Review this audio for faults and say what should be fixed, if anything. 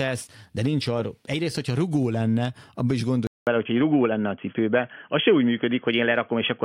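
Input switched to a poorer device, from 3.27 s to the end of the clip, just after "rugó lenne abban is". A silence of 200 ms marks the switch, after which the speech turns dull and boxy, with nothing above 3.3 kHz, a level shift of around 5 dB, and a faint new noise floor roughly 50 dB below the signal. This is likely the recording moving to a narrower-band microphone or a headset call profile. Lock the input device before recording so the system cannot change it mid-take.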